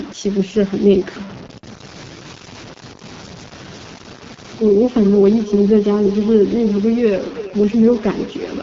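A speech clip with constant grainy distortion that follows the voice, noise roughly 20 dB below the speech. Quiet parts turn gritty. The cause is likely low bit depth without dither, truncated to very few bits. The voice is also rough and raspy, with nothing above 7.5 kHz. That fits the AMR wideband (HD Voice) codec at a low rate, around 8.85 kbit/s. From 4.1 s to the end at 8.62 s, a feedback echo between two devices repeats the speech roughly every 0.3 s. The repeats are about 12 dB below the speech at their loudest.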